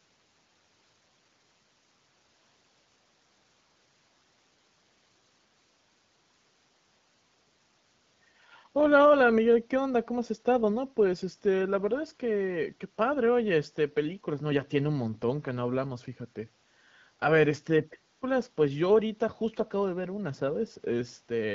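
No faults can be heard anywhere in this recording.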